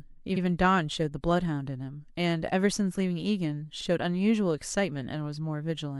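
At 0.36 s and again at 3.80 s, the speech stutters from repeated frames: a 52.2 ms stretch of compressed data is played twice, consistent with two duplicated codec frames. Each repeat adds 52.2 ms and causes an audible skip-back hiccup.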